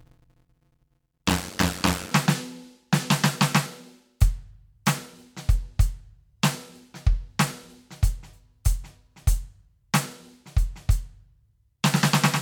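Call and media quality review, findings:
Block size mismatch (padded), 0.00–2.12 s: steady buzz at about 91.9 Hz over the music, playback slowed to 0.533x at roughly normal pitch. Producer stage writing short blocks, zero-filled to reader size. Fits 256-sample writes into 480-sample reads.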